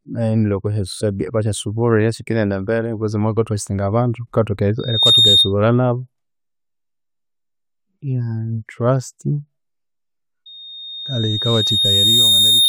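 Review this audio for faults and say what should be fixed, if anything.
Loudspeaker feedback squeal at 3.7 kHz, 4.79–5.53 s and 10.46 s to the end. The mic re-amplifies the speaker until that tone runs away. Lower gain, move the mic, or notch 3.7 kHz.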